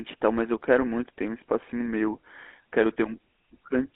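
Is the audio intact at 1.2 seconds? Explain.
No. At 1.2 seconds the speech carries GSM full-rate codec damage, as it does across the whole clip. The codec rebuilds speech from a vocal-tract filter excited by a sparse, regularly spaced pulse train, so only a coarse version of the excitation survives. This gives a plainly audible buzzy, gravelly roughness, within a narrow line band of roughly 250 Hz to 3.6 kHz. The heavy coding fits a bitrate of about 13 kbps.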